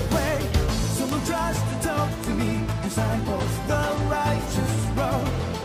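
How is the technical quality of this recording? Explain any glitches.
The recording is marred by one persistent clocking fault. From 0.14 s to 5.58 s there are word clock ticks: sharp clicks of uneven strength repeating about every tenth of a second, around fifty in all. The receiving device is running on its own clock rather than locking to the digital source. A steady tick rate like this fits two clocks differing by roughly 200 parts per million. Each time they slip past one another, a single sample is dropped or doubled and its neighbours are misread. On a waveform these appear as tiny one-sample steps or spikes, and on a spectrogram as thin, evenly spaced vertical lines running through all frequencies.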